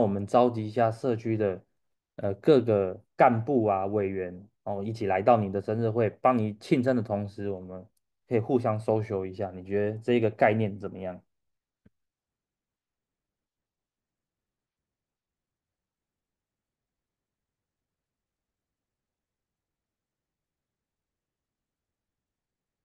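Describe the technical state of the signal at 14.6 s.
The signal at 14.6 s is intact, with no audible fault at that point.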